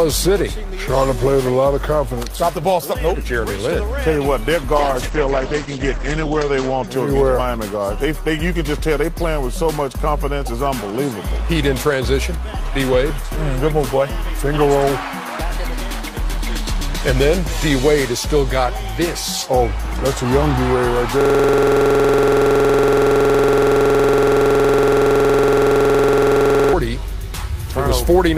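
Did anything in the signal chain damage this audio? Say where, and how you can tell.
Yes. Two stages left audible damage. The first is a call bitrate drop in the codec and network stage, from 4.76 to 6.93 s. The top end collapses from about 20 kHz to about 8 kHz, and the texture turns coarse and watery for roughly 1.7 s at its worst before recovering. That fits an Opus encoder pushed from around 48 kbps down to about 11 kbps after the bandwidth estimate fell. On a spectrogram, everything above 8 kHz goes abruptly dark across that span.

The second is a system hang loop at the driver or buffer stage, from 21.21 to 26.73 s. A 46.44 ms slice of audio repeats exactly, over a hundred times, giving a rigid buzzing stutter at 21.5 Hz. The loop length points to a 2048-sample ring buffer that the hardware kept replaying while the host stalled. On a waveform it appears as an identical short block tiled end to end. 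On a spectrogram it shows as evenly spaced vertical striping with a frozen spectral shape.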